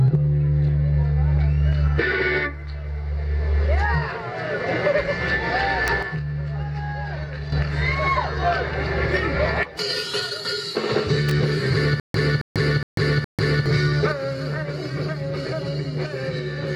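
At 5.88 s there's a sharp snap sitting on top of the sound, an electrical switching spike. It's most likely a nearby switch, motor or static discharge arcing and getting picked up on the audio line. A second one lands from 11.29 to 11.31 s and is a touch longer. Both are added on top of what's there rather than replacing it.

From 6.03 s the level drops about 8 dB all at once, a sudden gain jump. The background noise falls right along with the sound, which is the giveaway that the gain itself moved. It's likely a digital gain change applied from one sample to the next with no ramp. It holds until 7.52 s and then snaps back up.

From 12.00 to 13.66 s you get a stutter with silent gaps. A burst of about 270 ms plays, then roughly 144 ms of dead digital silence, repeating every 415 ms or so, four times over. The player or stream likely stalled and replayed its last fragment on each retry before running empty, so whatever should have played there is simply gone.

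Then at 14.12 s there's another sudden gain jump, this time down about 6 dB. Sound and noise floor drop together, and it stays that way to the end.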